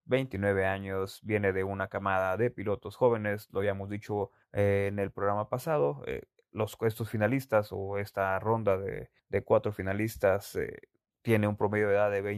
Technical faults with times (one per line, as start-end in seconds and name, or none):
none